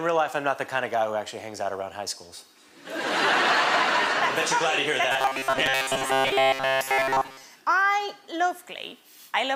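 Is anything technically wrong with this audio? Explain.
Yes. From 5.12 to 7.43 s the audio turns into robotic sound from repeated short buffers, a rigid metallic buzz at 133 Hz that only loosely tracks the original. The likely cause is new data arriving too seldom, so the playback repeats a fragment about 7.5 ms long while roughly two thirds or more of the real audio is skipped. A waveform shows identical cycles tiling every 7.5 ms; a spectrogram shows flat, evenly spaced harmonic lines at multiples of 133 Hz.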